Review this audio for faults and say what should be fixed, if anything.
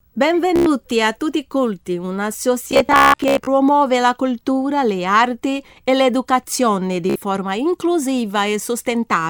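Bluetooth stutter appears at 0.56 to 0.66 s, 2.71 to 3.47 s, and 7.10 to 7.16 s. Late or lost wireless packets made the receiver replay its last short slice, giving a rapid buzzing repeat. The middle burst is the worst, with about 480 ms lost across 0.75 s and a longest run near 0.17 s. A plain dropout goes silent, but this fault repeats sound, and the audio then picks up further along. To prevent it, keep the receiver close with fewer 2.4 GHz conflicts, or record over a wired link.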